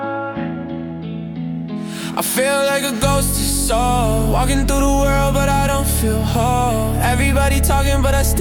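No technical fault can be heard anywhere in this audio. There is nothing here that calls for a time, a cause or a fix.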